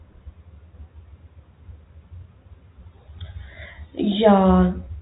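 Nothing goes wrong anywhere in this speech, which comes through the usual G.711 telephone coding with its band stopping at about 3.8 kHz, just as that phone-line path should.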